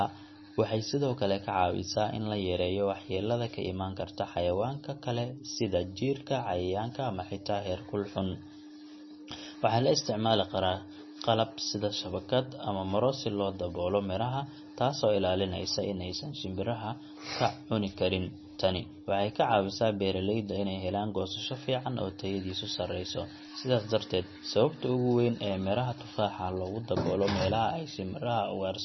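Throughout the speech, the treble stops dead at 5.9 kHz. Weak detail flickers in and out between frames. This gives a watery, swirling texture, and s sounds turn metallic. The heavy damage likely comes from MP3 compression, and the sound points to a bitrate near 25 kbps.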